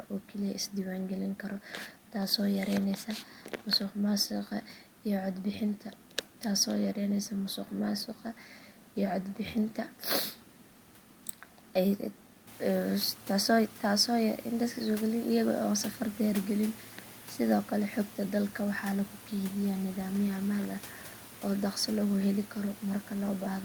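No technical faults can be heard anywhere in the recording. The room's background noise sits about 32 dB below the speech, then rises by about 15 dB roughly halfway through, to about 22 dB below the speech.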